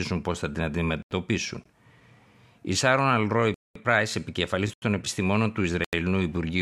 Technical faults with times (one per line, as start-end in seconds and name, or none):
1.02-1.11 block of digital silence
3.54-3.75 block of digital silence
4.73-4.82 block of digital silence
5.84-5.93 block of digital silence